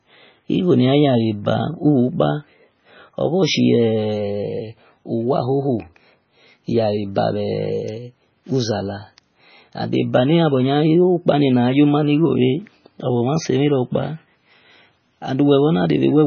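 Throughout, the speech is dull above 6.5 kHz and watery, with swirling, chirpy sibilants, likely heavy MP3 compression near 17 kbps; plain low-pass filtering wouldn't swirl.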